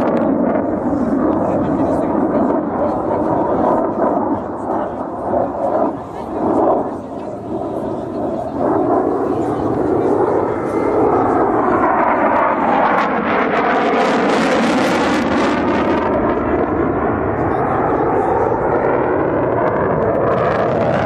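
No technical faults can be heard anywhere in the recording; the signal holds steady throughout, with no interruptions, distortion or level problems.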